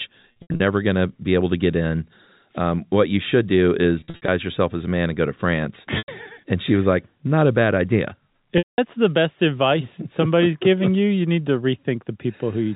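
Packet loss with pitch repetition shows up four times on this speech, which otherwise comes through the narrowband 4 kHz ceiling of G.711 telephone coding. Each time, the receiver covers a gap by looping the last pitch period and fading it over about 50 ms. Short gaps come out as a held, buzzy note. Longer ones fade to silence, and the speech returns through a short cross-fade.

At 0.32 to 0.60 s, just before "going to be able", about 200 ms goes missing in bursts spread across that stretch, with the longest run at 80 ms. At 4.00 to 4.28 s, leading into "yourself as a man", about 180 ms is lost the same scattered way, with a 60 ms longest run. About 100 ms drops out at 5.98 to 6.08 s. Then 200 ms goes at 8.58 to 8.78 s, between "not a bad idea" and "the best advice somebody's". The losses seem to come in 20 ms steps, which fits 20 ms packets.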